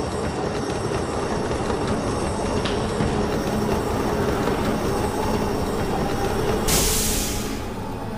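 From 3.27 s to the end, the audio was upsampled from 24 kHz to 44.1 kHz by holding each sample without a smoothing filter, giving imaging from sample-and-hold upsampling. Mirror copies fill 12 to 24 kHz about 16 dB below the signal, a bright metallic fizz tracking the sound's level.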